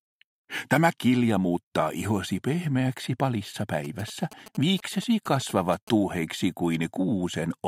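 GSM signalling bursts appear from 3.85 to 5.89 s: a galloping dit-dit-dit of short buzzes pulsing at about 217 Hz, sitting around 20 dB below the main sound. A nearby 2G phone is exchanging brief signalling traffic with its network, and some part of the audio circuit acts as a detector, rectifying the radio energy so each burst's envelope lands in the audio band as an audible click or buzz.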